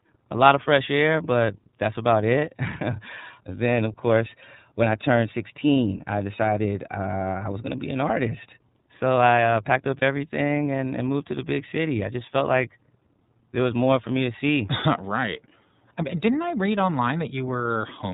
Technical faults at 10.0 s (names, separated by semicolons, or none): iLBC codec; lost iLBC frames